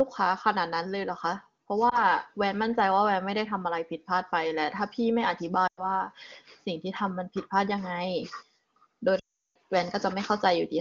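Speech over wideband AMR with three dropouts: a brief warble at 1.89 to 2.01 s, a fading stretch at 5.67 to 5.87 s, and a longer tail sinking to silence at 9.19 to 9.57 s. These are lost AMR speech frames. The decoder repeated its last good settings at falling gain, spanning roughly 20, 100 and 360 ms.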